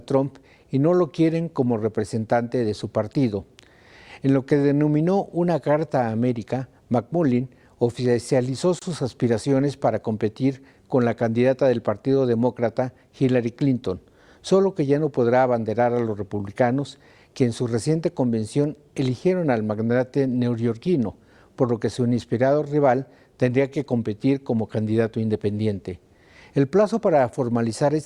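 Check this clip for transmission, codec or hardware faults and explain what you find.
One fault turns up: a gap at a join of encoded pieces, from 8.79 to 8.82 s. The audio was evidently encoded in separate segments and spliced without trimming, so the encoder's start-up delay and the padding on the final frame of the earlier piece both remain at the seam. That leaves a 26 ms hole of silence in otherwise continuous sound, with smeared edges, after which the sound resumes exactly where it broke off.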